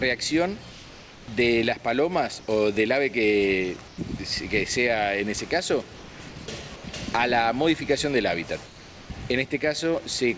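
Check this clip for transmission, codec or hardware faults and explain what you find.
Two related faults turn up, both from a transmission path that stops sending during pauses. Nothing is heard above 8 kHz, which fits a wideband call codec such as G.722.

Comfort noise in place of the background at 0.72–1.28, 2.40–2.48, 3.88–3.98, 5.96–6.20, 6.76–6.84 and 8.66–9.10 s: the likely cause is discontinuous transmission. The receiver synthesises a smooth, featureless hiss about 2–3 dB quieter than the real background, which sits around 20–24 dB below the loud parts. It differs from a dropout because noise, not silence, fills each gap.

Sound dropped by the voice detector at 6.30–6.36 s: the detector misjudged real sound as background and likely cut it, clipping about 30 ms of content into the same synthetic hiss. Unlike the gaps above, actual sound goes missing here, not only background texture.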